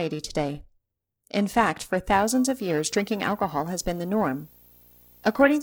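From the start, periodic clock jitter near 1 kHz adds sidebands around every component of the speech, giving a rough, metallic edge that disappears in pauses. From 2.12 s to the end, video or display buzz couples in at the 59.94 Hz field rate with hash above it and a 15.7 kHz line tone, sitting about 30 dB below the speech.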